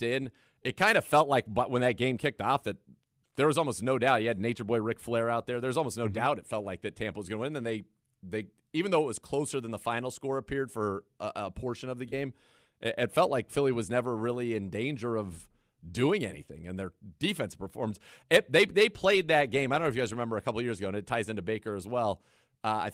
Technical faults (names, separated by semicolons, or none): none